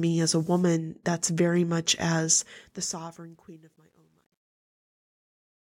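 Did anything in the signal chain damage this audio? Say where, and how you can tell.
Yes. Truncation distortion on the fade, from 2.30 s to the end, points to a sample-format conversion or gain stage keeping about 11 bits without dither. The fade-out starting around 2.3 s turns gritty, worst from 3.39 s onward. This grit follows the falling level rather than appearing as steady hiss.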